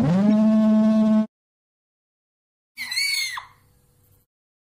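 MP3 compression runs through the whole clip, with plainly audible codec damage: a watery, swirling texture where weak frequency components flicker in and out between frames, and smeared attacks, likely from an encoder short of bits at a setting near 64 kbps. A corrupt frame decoded appears from 0.29 to 0.31 s as a brief chirpy burst peaking around -15 dBFS. Damaged bits in roughly a couple of frames were played anyway, placing energy at wrong frequencies for their duration.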